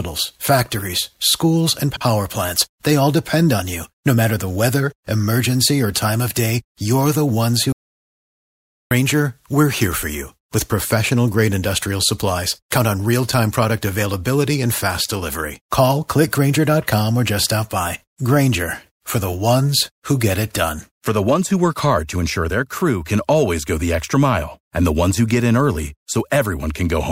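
A speech recording with two faults. Just after "factories schools", from 1.90 to 2.02 s, a brief garbled flutter comes from frames out of order: two blocks of about 52 ms were decoded swapped. From 7.72 to 8.91 s the sound cuts to dead silence with no room tone, returning at "we're here for you", an audio dropout to silence most likely caused by a lost input being recorded as silence.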